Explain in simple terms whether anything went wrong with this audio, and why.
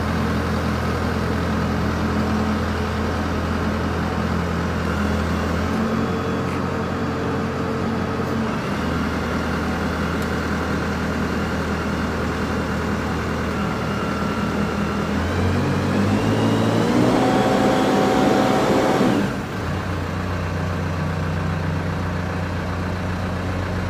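A gritty, buzzing fizz clings to the sound from 0 to 1.5 seconds. That's crude rate conversion: samples were simply dropped to change sample rate, likely 48 to 44.1 kHz, without smoothing.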